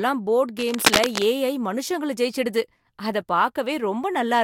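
From 0.59 to 1.25 s, a dense, uneven scratching and rustling sits over the speech at roughly the same loudness as the voice. This is cable scratch noise, likely from a worn cable or connector being moved, its contact resistance fluctuating rapidly.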